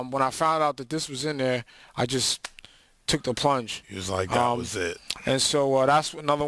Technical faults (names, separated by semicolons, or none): aliasing